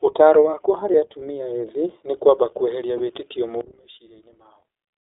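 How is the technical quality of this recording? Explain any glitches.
The recording has audible narrowband coding damage throughout, two brief dropouts, and a steep loss of level near the end.

iLBC codec, throughout: the audio passes through a narrowband VoIP codec that codes each 20 ms frame independently, and its rough, slightly synthetic texture, which fits iLBC's 15.2 kbps mode, is plainly audible. The line band runs only from about 150 Hz to 3.7 kHz, so the speech sounds thin and boxed-in, with no low body and no sibilant air above that range.

Lost iLBC frames, at 0.92 to 0.96 s and again at 2.98 to 3.00 s: each gap lasts about 20 ms, which points to a single dropped packet. The decoder covered each gap by repeating the last pitch cycle blended with noise, so you hear a short, buzzy, held sound in place of the real signal. Because iLBC frames don't depend on their predecessors, normal speech resumes cleanly right after each one.

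One channel inverted, from 3.61 s to the end: the level suddenly falls by about 20 dB and the speech turns faint. The likely cause is one stereo channel flipped in polarity and then summed to mono, so the centred speech common to both channels cancels and only a small residue of the differences between them survives.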